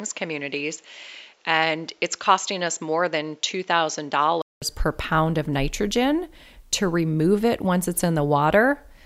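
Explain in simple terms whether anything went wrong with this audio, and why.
From the start to about 4.62 s, the speech sounds dull and slightly quieter, with nothing above 7.6 kHz and a different background hiss. After a brief gap of about 0.2 s it clears at "per pound of nitrogen". That sudden change in tone, level and noise is the mark of an input switched to a poorer device, likely a different microphone.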